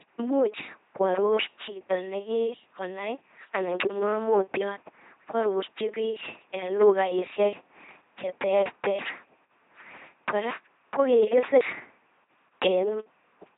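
Throughout, the speech passes through an LPC-10 vocoder at 2.4 kbit/s, rebuilt from pulse-or-noise excitation, so it buzzes robotically, with nothing above 3.9 kHz.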